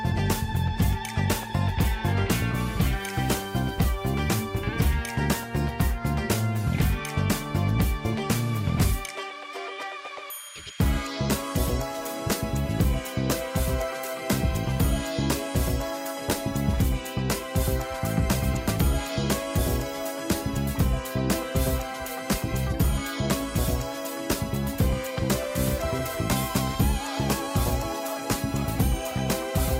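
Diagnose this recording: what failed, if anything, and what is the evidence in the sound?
No stage in the signal path shows a failure: the recording carries a continuous, intact signal with no dropouts, level faults or timing disturbances anywhere in it.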